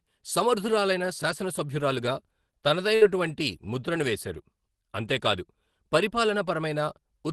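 At 2.95 s a burst of packet loss interrupts the speech until 3.04 s. The receiver bridges the gap by extending the last received sound for about 59 ms, letting it decay, so a short held buzz or fading hiss replaces the real signal. When audio resumes, roughly 60 ms of speech is gone. The surrounding audio has the Opus call codec's usual coding noise, with content stopping at 12 kHz.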